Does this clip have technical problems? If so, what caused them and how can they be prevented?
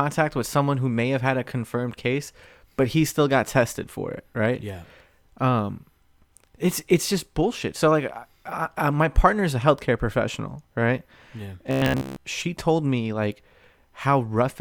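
Yes. From 11.67 to 12.30 s, robotic sound from repeated short buffers turns the speech into a metallic 66.7 Hz buzz. Late audio likely made playback loop a 15 ms chunk for most of that span. A spectrogram shows rigid 66.7 Hz harmonic stripes, and the waveform shows identical repeating cycles. A larger jitter buffer would prevent it.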